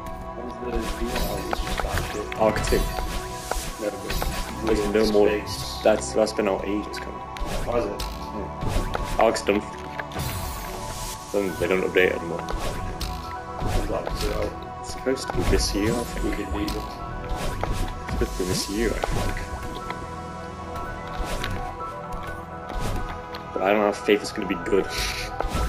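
No technical faults are audible anywhere in the recording.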